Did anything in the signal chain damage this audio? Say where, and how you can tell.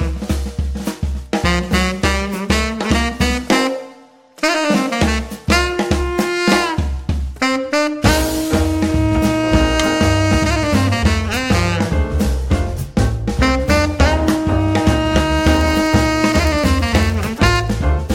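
Yes. A block size mismatch (padded) at the driver or buffer stage, 15.36 to 17.73 s, adds a steady 43.1 Hz buzz, which fits a 1024-sample buffer. Each block ends in a brief zero gap. Pitch holds and playback slows only to 0.999x, unlike irregular underrun dropouts.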